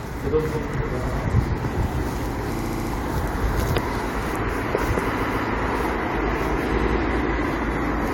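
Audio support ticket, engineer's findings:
Repeated frames: stutters at 1.07–1.16 s (93 ms block, played twice), 2.56–2.90 s (70 ms block, six plays), 5.16–5.44 s (139 ms block, three plays), 6.78–6.97 s (93 ms block, three plays). Encoder output or transport resending compressed frames; decoder replays them, adding about 0.9 s total.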